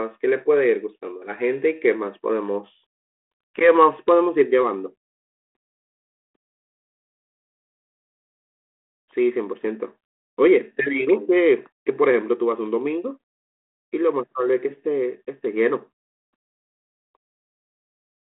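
No technical faults are audible in this speech recording, which is carried in the narrow telephone band of roughly 300 Hz to 3.5 kHz through a 32 kbit/s G.726 ADPCM path whose coding working as expected.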